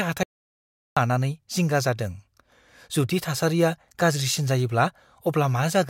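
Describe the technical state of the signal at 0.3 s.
At 0.3 s the signal is in an audio dropout to silence, from 0.23 to 0.97 s. The speech cuts to silence with no room tone left. The input was likely lost while silence kept being written.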